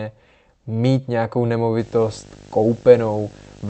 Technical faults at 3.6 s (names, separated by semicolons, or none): video or display buzz